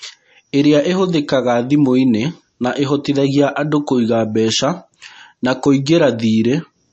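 Throughout the speech, likely MP3 compression at a low bitrate (around 34 kbps) strips everything above 8.3 kHz and leaves watery, swirling sibilants; a spectrogram shows a hard ceiling and flickering high-frequency patches.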